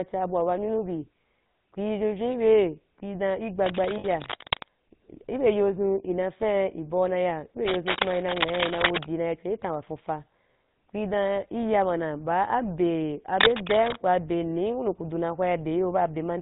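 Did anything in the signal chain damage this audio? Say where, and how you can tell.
Yes. The whole recording has a buzzy, gravelly roughness over the speech, with nothing above 4 kHz and a coarse, grainy texture on every voiced sound. That is the GSM full-rate codec at the codec stage. It rebuilds speech from a vocal-tract model driven by a sparse, regularly spaced pulse train, and that thinned excitation is what makes the buzz. The band limit and the plainly audible damage fit the 13 kbps full-rate coder.

Three bursts of harsh scratching and rustling sit on top of the sound, from 3.62 to 4.68 s, from 7.67 to 9.07 s and from 13.38 to 14.01 s. The first and last are roughly as loud as the speech. The middle one is a little louder and the longest. The dense, irregular crackle points to cable scratch noise in the analogue wiring. The likely cause is a worn cable, connector or control being moved, which makes its contact resistance jump about rapidly.

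From 3.98 to 4.06 s, inside the first scratch burst, the speech stops moving and hangs as a short, rough metallic ring. That frozen tone is the mark of lost GSM frames on the network side. The decoder had no valid data for about 60 ms, which fits three 20 ms frames, so it kept replaying the last good frame's settings.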